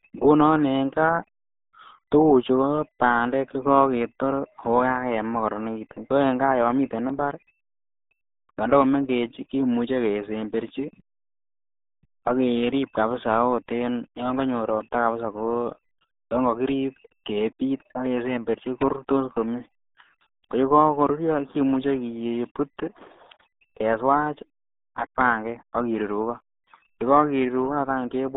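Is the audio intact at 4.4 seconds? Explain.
No. The RealAudio 14.4 codec runs throughout, so at 4.4 s the speech is confined to about 200 Hz to 3.7 kHz, with nothing above 3.8 kHz, fitting an 8 kbit/s codec. Unlike a clean telephone band-limit, heavy coding damage makes it gargly.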